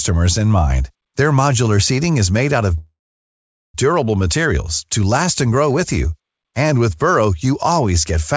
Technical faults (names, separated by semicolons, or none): call audio freeze